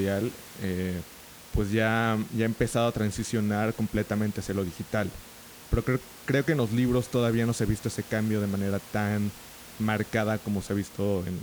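No technical faults can be heard in this speech recording, and the only background sound is the ordinary room noise picked up by the microphone, sitting about 20 dB below the speech.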